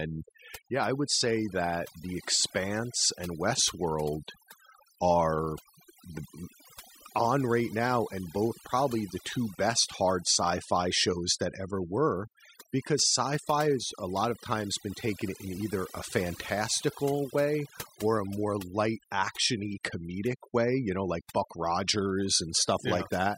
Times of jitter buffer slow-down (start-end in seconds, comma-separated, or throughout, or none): none